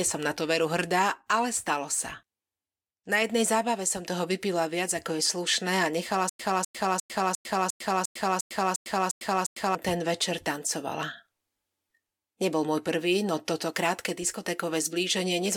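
Stutter with silent gaps runs from 6.29 to 9.75 s in this speech clip, right after "slušné a nechala" and before "ten večer". A 251 ms fragment plays ten times, each followed by about 101 ms of digital silence, so the burst returns every 352 ms at an even pace. The cause is likely a stalled player or stream that replayed its last buffered fragment at each retry and then ran dry, so the audio due in that span is lost.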